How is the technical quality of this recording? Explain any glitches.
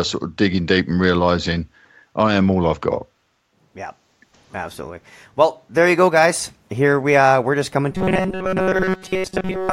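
The recording is clean until near the end, when one fault takes over and runs to the finish. From 7.92 s to 9.73 s the speech turns into robotic sound from repeated short buffers, a rigid metallic buzz at 188 Hz that follows the words only roughly. The likely cause is audio arriving too seldom, so the software loops a roughly 5.3 ms slice for most of that stretch while real speech is skipped. A spectrogram shows flat, evenly spaced harmonic lines locked to 188 Hz. The waveform shows one short pattern repeating.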